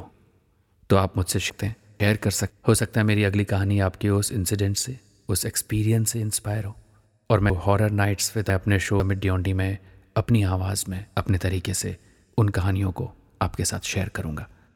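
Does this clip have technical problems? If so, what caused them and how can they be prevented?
Yes. Between 1.5 and 2.5 s, and again between 7.5 and 9.0 s, the speech jumps around. These are chunks out of order: a 500 ms block plays one slot late, then two slots late. Buffering chunks by sequence number before playback or writing would prevent it.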